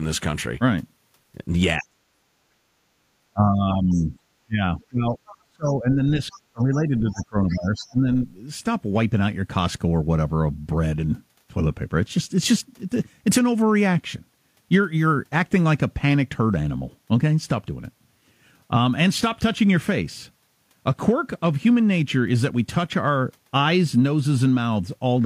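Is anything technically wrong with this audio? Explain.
Yes. The first eight seconds of this speech have two related problems.

Speech is suppressed in double talk at 1.8–2.02 s, 3.33–4.14 s, 4.46–6.01 s and 6.36–8.07 s. The talker's level sinks, by about 40 dB at the start, about 10 dB at 3.33 s, about 35 dB at 4.46 s and about 20 dB at 6.36 s. This is likely an echo canceller that could not separate the talker from the loudspeaker echo while both sides spoke, and so turned everything down. Unlike a network dropout, it dips and recovers in step with the other voice.

The other side's voice is leaking through at 3.91–4.06 s, 5.26–5.37 s, 6.22–6.63 s and 6.97–7.92 s. A second voice sits about 25 dB under the talker, rising to about 20 dB under in the last stretch. The likely cause is residual loudspeaker echo that the canceller did not fully remove from the microphone. It is a distinct, separate voice, not a delayed copy of the talker as reverb or a feedback echo would be, and it appears mostly inside the suppressed stretches.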